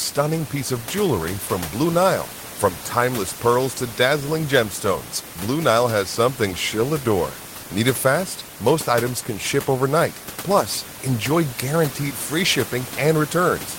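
The clip is speech, and nothing is technically wrong with it; the only background sound is ordinary room noise about 13 dB below the voice.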